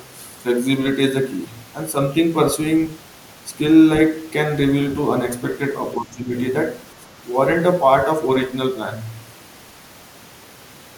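From 5.97 to 6.32 s the speech suddenly sinks, falling by something like 20 dB at its deepest, so the talker seems to duck away for a moment before coming back at full level. This is speech suppressed in double talk, likely caused by both ends speaking at once: the echo canceller could not tell the near talker apart from the loudspeaker echo and pulled the whole signal down for those few tenths of a second.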